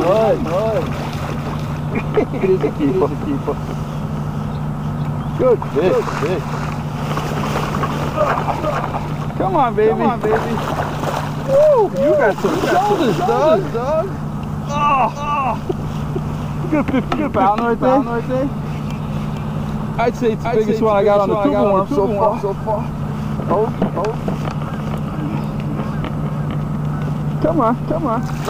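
From start to finish, every sound is shadowed about half a second later by a full-band repeat roughly 5 dB quieter, dry and undecaying, like a hard slapback. This doubled audio track likely comes from the same signal being captured again through a slower path.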